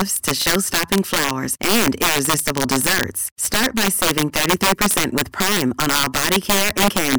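Speech, with integer overflow throughout: the signal runs about 10 dB past full scale, and a few percent of samples wrap to the opposite sign instead of limiting. Loud syllables crack violently; waveforms show peaks jumping across the full range, spectrograms broadband vertical streaks.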